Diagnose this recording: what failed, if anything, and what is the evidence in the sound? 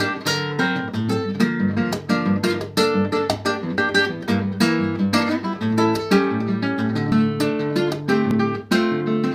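Three abrupt skips at 3.78 s, 7.12 s and 8.31 s, each with the sound jumping forward rather than pausing, point to the driver or buffer stage: this is likely a dropped buffer (overrun). The capture side did not read its samples before the hardware overwrote them, so a short stretch vanished and the neighbouring audio was spliced together. Each gap is a few tens of milliseconds, slightly longer at 7.12 s, with no silence at the joins.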